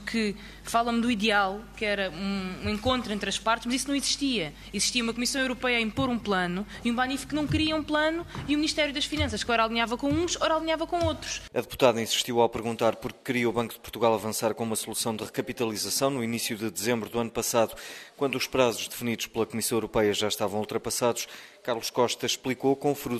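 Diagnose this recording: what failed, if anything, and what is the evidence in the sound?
Nothing failed; no fault is audible anywhere.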